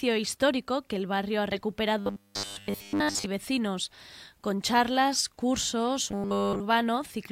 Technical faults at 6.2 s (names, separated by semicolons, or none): robotic sound from repeated short buffers